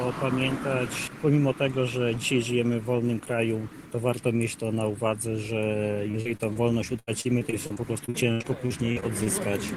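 Repeated packet loss (robotic sound) hits the audio at 6.11–6.57 s and 6.99–9.28 s. Packets keep going missing, and each hole, up to 36 ms and then 82 ms, is patched by extending the previous sound, leaving about a fifth of each stretch choppy.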